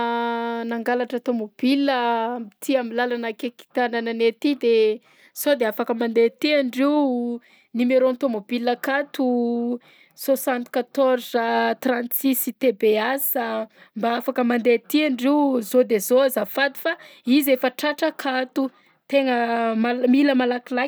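No technical faults are audible anywhere in this speech recording.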